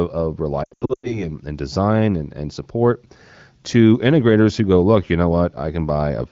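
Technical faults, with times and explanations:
0.63–1.31 s, lost AMR speech frames: about 300 ms of audio is missing, consistent with roughly fifteen 20 ms frames, in gaps of up to 100 ms. The AMR-WB decoder covers each gap by repeating the last good pitch and vocal tract settings at falling gain, which produces brief warbles and smeared, fading sound. The wideband codec fades these gaps out quickly. On a spectrogram, harmonics stretch flat and then dim. The waveform shows short collapses in level before "and design and and".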